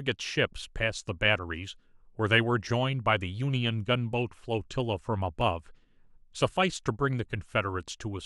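A speech recording with a single tiny skip in the sound at 5.41 s where a few milliseconds drop out and the waveform jumps abruptly. This is an overlap between stream segments: the clip is delivered in segments about 6 s long, and at this boundary two of them carried overlapping time stamps. The player discarded the overlapping stretch as if it were duplicated, but that audio was never actually doubled, so the missing sliver leaves an audible discontinuity.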